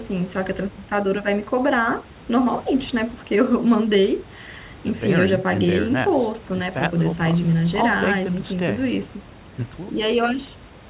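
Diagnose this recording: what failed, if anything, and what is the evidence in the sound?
Nothing failed: the speech sits in the usual telephone band with nothing above 4 kHz, as a 64 kbps G.711 A-law call path gives, and the room noise stays about 25 dB below the voice, so it all sounds like an ordinary working call.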